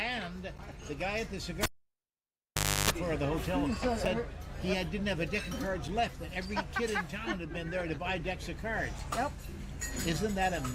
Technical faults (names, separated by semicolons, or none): block of digital silence; cable pulled and plugged in